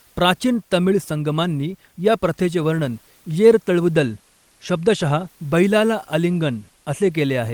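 Listening to the speech in this clip, nothing stood out as a technical problem, with only faint room noise sitting about 40 dB below the voice.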